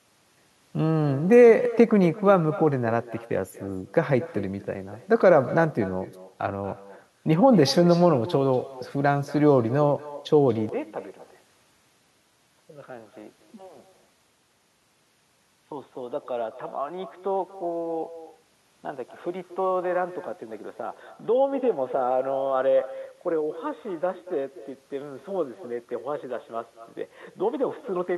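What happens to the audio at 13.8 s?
At 13.8 s you're a few seconds into a stretch that starts at 10.69 s and runs to the end of the clip, where the sound has gone dull and boxy. The level drops by about 10 dB, and there's a new, faint noise floor far below the speech. There's no gap at the change, which happens abruptly. The likely cause is that the input switched to a poorer device, such as another mic or a headset's call profile, with its narrower band and its own tone and noise.

On top of that, there's echo with no canceller, present the whole way through and so at 13.8 s too. The far end is playing the call on a loudspeaker, their mic picks it up, and nothing strips it out. Each phrase comes back around a fifth of a second later as a thin shadow, about 17 dB below the direct speech.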